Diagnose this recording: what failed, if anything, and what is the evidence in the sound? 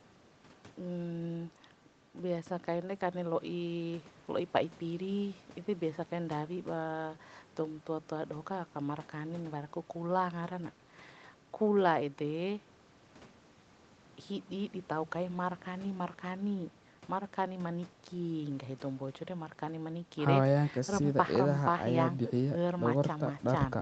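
Nothing in the signal chain has failed: the speech carries the ordinary signature of a call path, with the lowest bass removed by the microphone processing, nothing above about 8 kHz, and the usual coding noise of a wideband call codec such as Opus.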